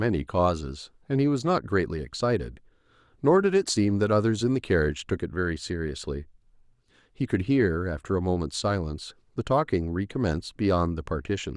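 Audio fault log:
No faults are heard in the speech recording. Nothing in it calls for an entry in this log.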